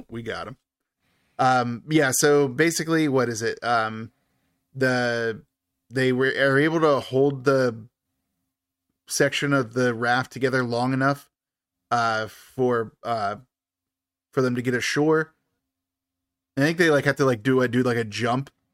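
No technical faults can be heard anywhere in the speech recording, and the signal holds steady throughout.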